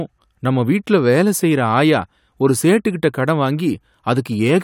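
No technical faults can be heard anywhere in the speech signal.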